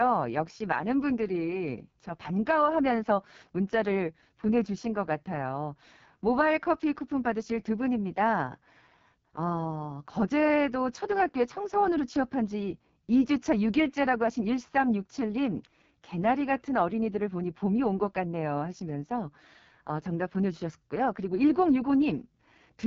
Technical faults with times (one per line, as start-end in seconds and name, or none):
0.00-22.86 AMR wideband (HD Voice) codec